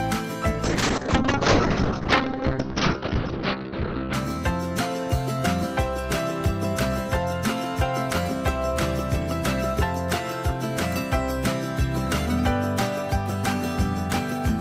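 Call bitrate drop from 0.64 to 4.19 s: the audio turns rough and muffled, fitting a fall from 48 to 9 kbps, and the spectrogram loses everything above 6 kHz.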